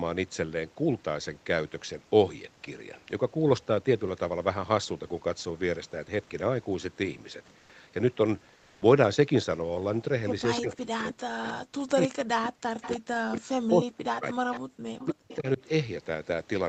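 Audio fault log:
7.59 to 7.69 s and 8.55 to 8.81 s, comfort noise in place of the background: in two short pauses, 0.1 s and then 0.26 s long, the room tone turns flat and featureless for a moment. The first patch is about 3 dB quieter and the second is level with its surroundings. The likely cause is Opus discontinuous transmission. The sender goes quiet when it hears no speech, and the receiver fills the gap with synthetic noise roughly shaped like the real background, which sits about 32 to 35 dB under the loud parts.
10.57, 11.48, 12.00, 12.82, 14.52 and 14.99 s, echo leak: faint ghost copies of the far side come back about 0.3 s late. They are about 15 to 20 dB under the speech, mostly brief scraps, with the last stretching to about 15.36 s. That points to a loudspeaker at the other end whose echo canceller likely let part of the playback slip through its microphone and back down the line.
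10.58 to 14.64 s and 15.05 to 15.61 s, speech suppressed in double talk: while both ends are talking over each other, the talker keeps dipping. The drops reach about 40 dB, adding up to roughly 3 s in the first stretch and about 0.4 s in the second. The echo canceller likely couldn't tell its own talker from the returning echo, so it clamped down on both. That lines up with the echo scraps landing in the same spans.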